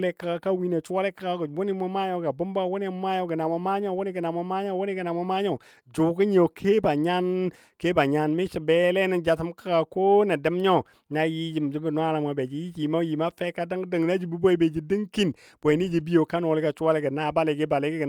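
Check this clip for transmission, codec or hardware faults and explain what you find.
Nothing faulty can be heard anywhere in the recording.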